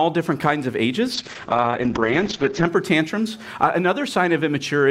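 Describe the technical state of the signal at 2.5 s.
At 2.5 s you're well into a call bitrate drop that runs from about 1.15 to 2.73 s. The bandwidth estimate collapsed, so the encoder got starved of bits and sat at its floor for about 1.5 s. The audio goes coarse and watery, and the top end is chopped from around 20 kHz down to 8 kHz, so it sounds muffled. That fits a rate falling from something like 128 kbps to roughly 8 kbps.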